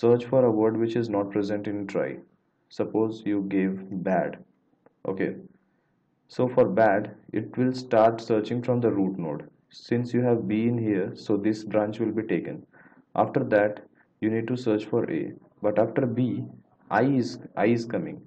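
No technical faults can be heard anywhere in this clip.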